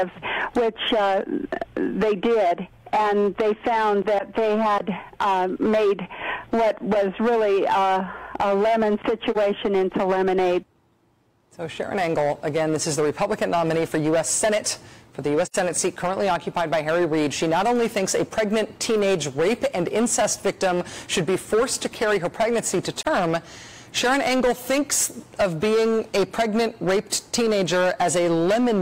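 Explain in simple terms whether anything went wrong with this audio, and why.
A harsh, fuzzy edge sits on every loud moment from start to finish. That is hard clipping: the sound was pushed well past what the recording chain could hold, so roughly a tenth of the samples were sliced flat, adding gritty high-pitched distortion.

Three brief, soft-edged gaps interrupt the sound at 9.31 to 9.37 s, 15.45 to 15.56 s and 23.02 to 23.06 s, fading out and back in. This is AAC frame loss with muting. Chunks of the compressed stream went missing and the player filled them with silence. The 43 ms gaps fit one lost chunk each, and the 85 ms gap fits two.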